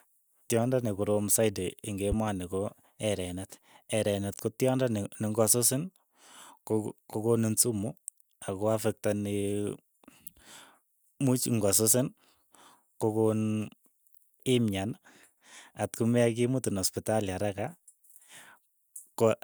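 At 2.12 to 2.30 s, a loud pop: two sharp thumps roughly 10 dB above the speech, likely a voltage spike from a switch, plug or static discharge.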